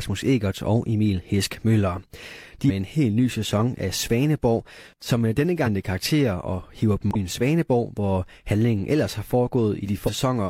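At about 7.11 s there's a short blip lasting roughly 50 ms, up to 7.16 s, from damaged data in the compressed stream. Corrupted bytes throw the decoder off, so it loses sync and hunts for the next good frame, giving a quick glitch in the speech.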